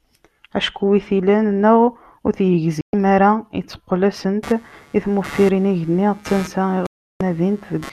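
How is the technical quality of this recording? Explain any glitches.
The recording has two kinds of glitch: brief silent holes in the speech and a computer buzz over the last part.

Digital broadcast dropout, at 2.81 to 2.94 s and 6.86 to 7.21 s: the speech cuts abruptly to silence for about 120 ms and then about 340 ms. The receiver muted after losing frames.

Computer activity noise, from 4.43 s to the end: a buzzing pulse around 150 times a second sits well below the speech. Load changes of the processor, graphics card or mouse are disturbing the audio circuit's shared ground.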